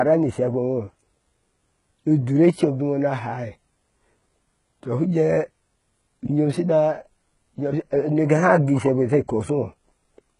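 Heavy HE-AAC compression, likely the cause, runs from start to finish. The sound stops dead at about 11.1 kHz, and the treble above the coded band is rebuilt from copied lower bands, so sibilants turn gritty and lispy, which fits a very low bitrate near 12 kbps.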